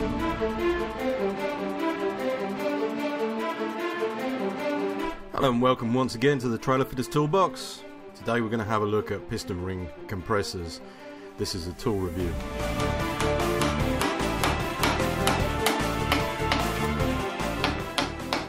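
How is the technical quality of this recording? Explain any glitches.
No technical faults or glitches can be heard anywhere.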